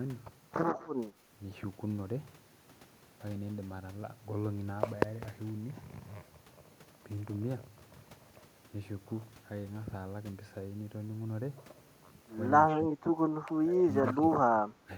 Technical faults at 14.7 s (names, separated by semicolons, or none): speech suppressed in double talk